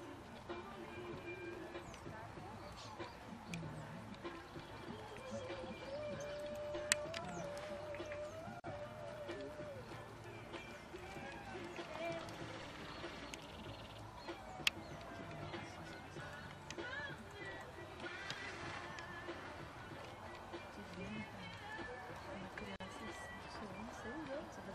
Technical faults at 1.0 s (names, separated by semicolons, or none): none